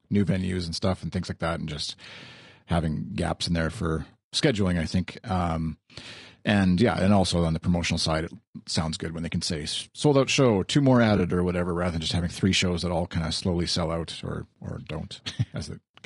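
Throughout the speech there is a rough, grainy texture, with noise filling the gaps between the voice's harmonics and a top band that sounds thin and synthetic. This is likely low-delay AAC compression (AAC-ELD). Its short frames resolve pitch poorly, and the damage is plainly audible at a rate that fits about 32 kbps.

At 3.05 to 3.08 s, just before "gaps in there for", and at 11.17 to 11.20 s, between "out show two more" and "or whatever rather than", brief smeared, noisy patches appear. Both are AAC frame loss with concealment: roughly 20 ms of audio went missing each time, and the decoder filled it in from the last good spectrum.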